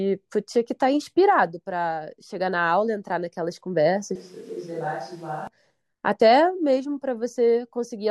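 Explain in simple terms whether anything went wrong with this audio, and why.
From 4.15 to 5.47 seconds the speech suddenly turns quieter, hollow and roomy, likely a switch to a distant microphone. Unlike a simple volume dip, the tone and background noise change too.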